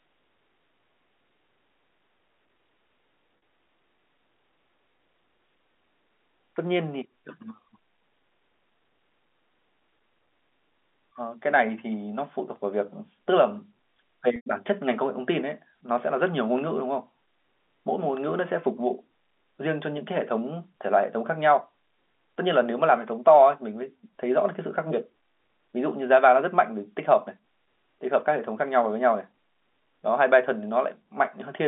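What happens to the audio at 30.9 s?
Nothing goes wrong at 30.9 s: the speech carries on intact through that moment, with only the narrow telephone band of the G.711 line shaping its sound.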